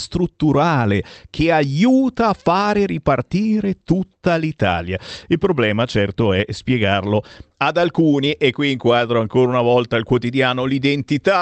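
No technical faults can be heard in this speech clip. The audio carries the coding texture of a WebRTC call path, and its high frequencies stop at about 8 kHz, which fits an Opus call codec running at a modest bitrate.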